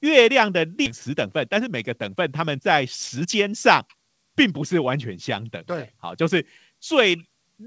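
At 0.86 s the speech skips ahead. Roughly a second of audio never plays. The jitter buffer discarded it, or it was lost in transit, while later audio was already queued. Nothing fills the gap. The sound on either side is butted together almost directly, so the speech lurches forward mid-flow.

From 1.08 to 2.62 s comes a jitter buffer speed-up. The buffer was holding more audio than it wanted. It shortened the backlog by cutting out tiny pitch-period slices again and again. Playback runs at about 122% speed and drops around a third of a second in total. Pitch stays the same, but the speech sounds rushed.

A second jitter buffer speed-up runs from 3.16 to 4.73 s. It is milder, at about 112%, and trims roughly a fifth of a second. The hurrying is gentler but still audible.

Throughout, nothing is heard above 8 kHz, which fits a G.722 call codec at 64 kbps.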